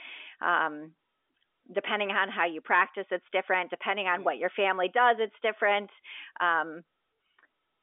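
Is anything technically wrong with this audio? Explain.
No technical faults are audible.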